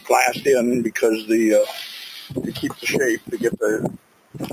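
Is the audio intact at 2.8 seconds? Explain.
No. From 2.68 to 2.85 s the sound sinks by up to about 11 dB. This is sound cut by the noise suppressor, which mistook it for noise. It sits within a wider problem: a noise suppressor applied to music or sounds keeps pumping, fluttering or thinning the audio with swings of around 15 dB, turning down steady and fading parts.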